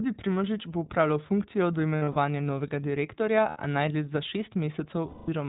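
Speech coded with the iLBC codec: nothing above 4 kHz, with plainly audible rough, synthetic coloration, which fits its 15.2 kbps, 20 ms frame mode. Lost iLBC frames at 1.98–2.16 s (scattered, longest run roughly 70 ms), 3.50–3.58 s and 5.08–5.30 s become held, buzzy vowel-like sounds as the decoder repeats the last pitch cycle, with clean recovery immediately afterward.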